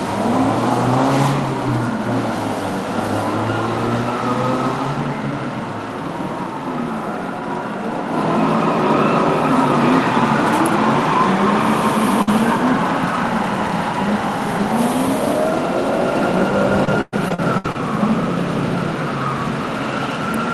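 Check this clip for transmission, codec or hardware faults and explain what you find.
Three kinds of transmission fault occur, all from packet loss on the call path. The Opus coding caps the audio near 12 kHz.

From 12.22 to 12.29 s there is a burst of packet loss. The last sound is stretched for about 50 ms and fades. About 40 ms is then skipped outright.

A lost packet rebuilt from error correction appears at 12.27 to 12.29 s and again at 12.89 to 12.91 s. A low-bitrate copy in the next packet fills each one, so those 20 ms sound rougher and noisier.

Between 16.85 and 17.76 s, repeated packet loss gives a robotic sound. Six holes are patched by extending the previous sound, the longest lasting 114 ms. About 30 percent of the span is concealed, roughly 70 ms comes from backup copies, and the sound turns choppy.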